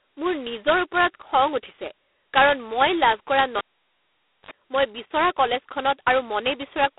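G.726 ADPCM coding runs through the whole speech clip: nothing above 3.9 kHz survives, the band sits at roughly 300 Hz to 3.6 kHz, and a harsh, rasping hiss rises and falls with the speech level, which fits the coarse 16 kbit/s mode, where each sample carries only two bits of prediction error. A cable pulled and plugged in follows at 3.58 s, just after "কাৰণ মই লাভ কৰা": a pop, then about 0.88 s of near silence, then a 53 ms burst of 50 Hz mains buzz as the plug tip makes contact, and a second pop as the sound returns at 4.51 s.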